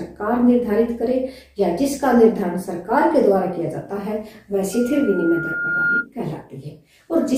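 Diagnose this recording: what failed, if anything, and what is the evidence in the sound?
The playback loudspeaker was picked up by the microphone feeding it, causing loudspeaker feedback squeal: at 1.4 kHz the loop gain exceeded one. From 4.73 s a single tone swells over about a second to roughly the level of the surrounding sound, ending at 6.07 s.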